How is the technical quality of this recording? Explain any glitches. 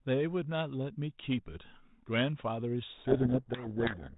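The recording has a clear fault near the end. It's narrowband telephone speech, with nothing above 4 kHz and a faint hiss that fits G.726 ADPCM at 32 kbit/s. From 2.88 s to the end there's a codec payload misread. The two ends disagree on the bit order inside each G.726 code word, so the decoder gets the right number of bits but reads them back to front. The difference values it reconstructs come out wrong, and the speech gets buried under harsh, gritty distortion that lasts right to the end.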